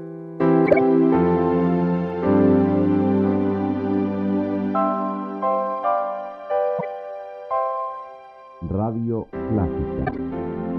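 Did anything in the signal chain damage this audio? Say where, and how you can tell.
Yes. The damage happened at the codec stage. Corrupt frames were decoded and played anyway. There are three bursts, at 0.66 to 0.79 s, 6.79 to 6.84 s, and 10.05 to 10.19 s. Each is a brief chirp or noise blast unrelated to the surrounding sound. The first spans several frames and peaks at about -5 dBFS. The second covers a couple of frames, at about -15 dBFS. The third spans a handful, at about -10 dBFS. Flipped bits gave the decoder wrong gains and codes, putting energy at the wrong frequencies for each damaged frame.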